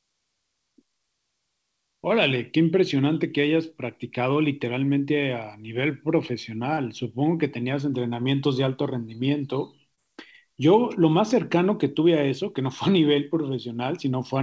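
At 6.74–6.80 s and again at 9.95–10.00 s, short concealed packet loss leaves a brief smear in the speech. About 30 ms of audio arrived too late each time, so the receiver extended the preceding sound and crossfaded back. The call path's content stops at 8 kHz, consistent with a G.722 codec.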